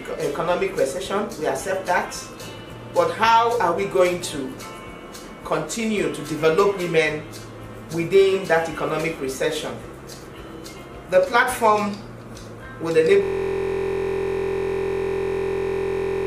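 From 13.23 s to the end, a system hang loop takes over. Playback froze while the hardware kept replaying one 23.22 ms slice, which fits a 1024-sample buffer. It becomes a steady 43.1 Hz buzz, not the irregular skips of random dropouts.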